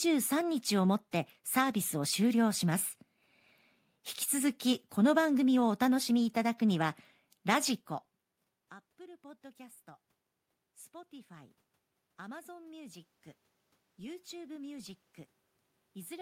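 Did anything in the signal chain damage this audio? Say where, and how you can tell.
Yes. The call-processing stage's automatic gain control reacted to a drop of about 24 dB in the input level and pushed its gain up, a rise in automatic gain of about 4 dB spread from 10.63 to 13.07 s. You can tell it is the processor rather than the talker because the room noise swells along with the voice over those two and a half seconds, unlike the earlier change around 7.5 s where the talker moved.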